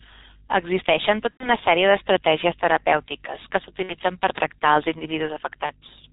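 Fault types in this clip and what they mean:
G.723.1 codec: Throughout, the speech stops sharply at 4 kHz and sounds muffled and hoarse, with smeared consonants. That fits G.723.1's 6.3 kbit/s mode. Its voice model updates only every 30 ms, giving a sluggish blur that plain band-limiting wouldn't cause.
VoIP packet loss concealed by the speech codec: At 1.31, 3.83 and 5.66 s the speech stretches into a fading sound, lasting about 90, 60 and 30 ms, and the longest gap falls silent in its third frame. That fits whole lost 30 ms frames, and the speech stays weak briefly after each.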